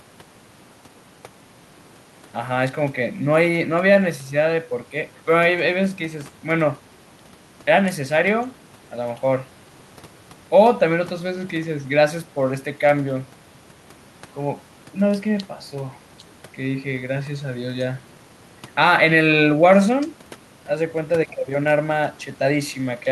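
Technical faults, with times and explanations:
No technical faults are present.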